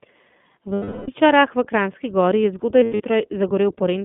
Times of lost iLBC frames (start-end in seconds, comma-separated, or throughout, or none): 0.74-1.09, 2.81-3.03